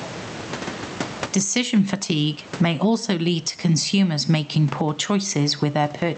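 Throughout this speech recording, the room noise sits about 32 dB below the voice, and the gain swings by something like 25 dB, squashing the dynamics. This gain pumping is likely caused by microphone gain set far too high, with a fast limiter repeatedly clamping it down.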